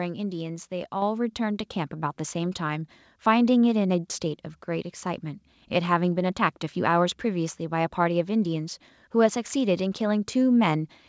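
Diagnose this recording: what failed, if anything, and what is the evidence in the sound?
The microphone volume stepped up at 1.02 s: call processing raised the input gain by about 6 dB in one jump, lifting speech and background together.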